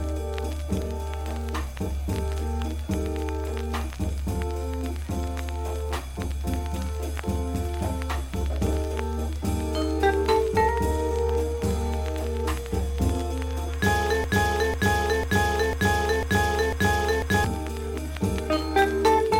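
At 14.24 s the audio catches on a fragment about half a second long and plays it six times back to back, like a broken-record loop, until 17.44 s. Each pass is identical, so you hear a stuttering pulse roughly twice a second. Most likely the player or stream stalled and kept resending the last chunk it had buffered. Whatever should have played during those three seconds is simply gone.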